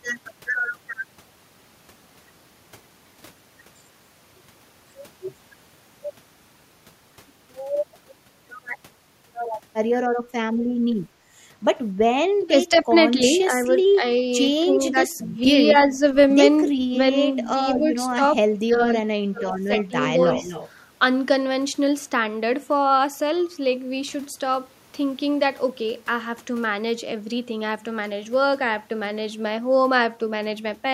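An echo canceller likely failed to tell its own talker from loudspeaker echo during overlapping talk, so speech is suppressed in double talk. The speech dips by up to about 20 dB across 12.37 to 14.03 s, then by about 15 dB from 14.6 to 16.03 s and about 20 dB from 16.63 to 16.95 s. From 17.52 to 20.22 s it drops by up to about 35 dB.

Echo leak, likely from incomplete cancellation, sends back a copy delayed 243 ms. It is faint at 13.39 to 13.67 s (about 30 dB down) and at 17.43 s (about 25 dB down). From 19.76 to 20.69 s it becomes stronger, about 15 dB below the speech.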